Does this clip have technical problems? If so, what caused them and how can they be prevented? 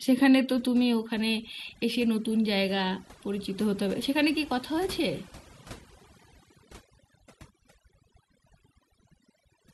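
Yes. Throughout, the gaps fall to near silence with twinkling specks. This is overdone noise removal: the reduction was set so aggressively that bands near its noise estimate were cut away, taking quiet parts of the voice too. Using gentler reduction settings avoids this.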